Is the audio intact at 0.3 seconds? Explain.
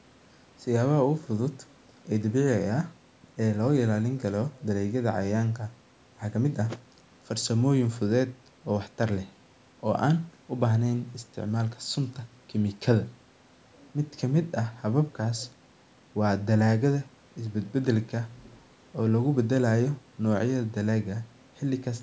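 Yes, the audio at 0.3 seconds is intact, with nothing there beyond the ordinary call microphone processing, which trims the lowest bass and carries nothing above 8 kHz.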